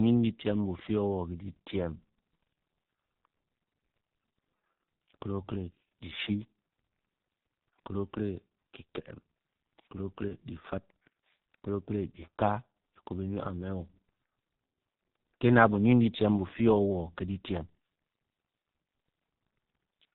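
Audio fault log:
Throughout: G.723.1 codec. The speech is muffled and hoarse, with nothing above 4 kHz and smeared consonants. That fits heavy compression at about 6 kbit/s.
10.28 to 10.36 s: VoIP packet loss concealed by the speech codec. A brief stretched, fading patch fits one lost 30 ms frame. The decoder then recovers over the next few frames.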